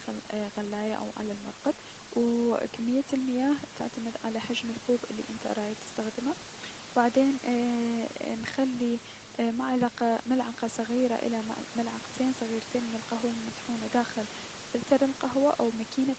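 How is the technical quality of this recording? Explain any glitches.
No glitches or faults heard.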